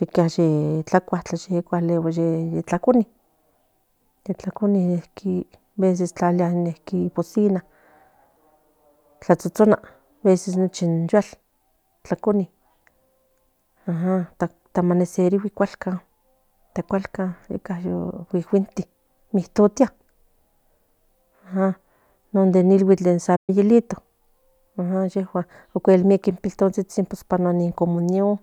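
At 23.36 s the speech halts abruptly for about 120 ms, a playback stall, likely from the player running short of data or its thread being blocked. It lasts too long to be a brief dropout of a few milliseconds, and sounds like a sudden freeze in mid-flow.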